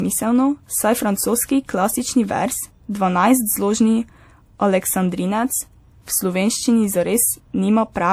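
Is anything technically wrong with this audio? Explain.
Yes. Throughout the speech, two kinds of codec artefact are heard together, with nothing above 20.1 kHz. The likely cause is transcoding between lossy codecs, fitting a low-rate MP3 re-encoded as WMA. The second codec wastes bits on the first one's errors.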